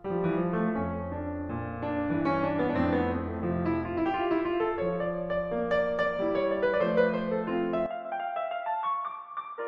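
At 7.86 s the music turns dull, loses everything above 3.8 kHz and drops about 10 dB, with faint new background noise: likely an input switched to a poorer device, not mere filtering.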